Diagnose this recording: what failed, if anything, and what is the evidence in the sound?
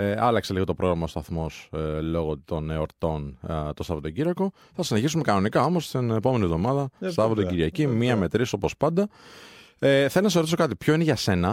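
Nothing failed; no fault is audible anywhere here.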